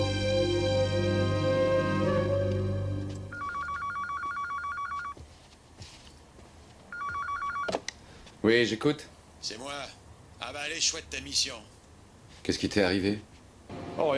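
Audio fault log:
No faults can be heard anywhere in this audio.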